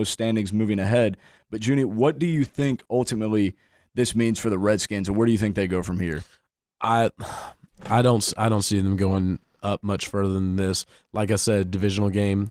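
Repeated packet loss (robotic sound) runs from 2.31 to 2.87 s, between "what do" and "ultimately this means for". Three short holes, the longest 20 ms, were patched by extending the preceding sound. This leaves roughly a fifth of a second of choppy texture with brief pieces missing.

A lost packet rebuilt from error correction follows at 9.07 to 9.17 s, after "I don't see them" and before "up much further than". About 60 ms, which fits three 20 ms packets, was decoded from low-bitrate copies carried in later packets. There is no gap, but that stretch sounds rougher and noisier.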